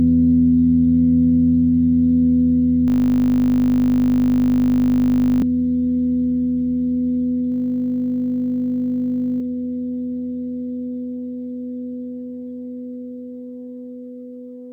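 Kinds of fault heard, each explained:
System hang loop: from 2.88 to 5.42 s and again from 7.52 to 9.4 s, the system froze while the hardware kept replaying one 20 ms slice of its buffer, giving a steady 50 Hz buzz, with about three and two seconds of sound lost.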